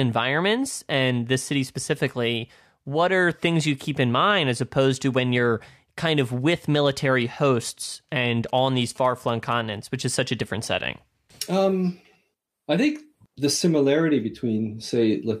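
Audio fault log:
8.49 to 9.53 s, GSM signalling bursts: a galloping dit-dit-dit of brief buzzes sits about 25 dB below the speech, with a buzz pitch near 217 Hz. A nearby 2G phone was exchanging short signalling bursts with its network, and these radio pulses were picked up and rectified in the audio circuitry, turning the transmitter's 217 Hz pulse rate into an audible buzz for roughly a second.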